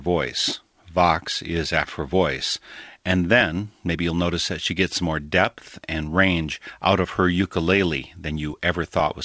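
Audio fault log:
1.84 s, skip ahead: the speech jumps forward with no gap. About a second of audio was dropped while later audio waited, and the two sides were joined directly.
2.60 to 4.33 s, jitter buffer speed-up: the speech sounds hurried at 112% speed but keeps its pitch, just before "that she". An overfull buffer cut short pitch-period pieces, about a fifth of a second in all.
4.73 to 6.59 s, jitter buffer speed-up: the speech runs at 106% speed at unchanged pitch, right after "that she". The buffer trimmed short pitch-period pieces again, about a tenth of a second in all.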